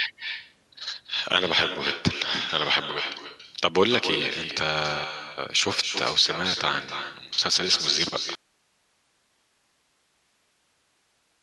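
From the start, every phrase is trailed about a third of a second later by a thinner copy only about 8 dB quieter: echo with no canceller, the far loudspeaker feeding its microphone straight back. At 8.35 s the speech cuts abruptly to faint hiss, around 45 dB below, until the end, an audio dropout to a faint residue, likely the signal lost while the path stayed live.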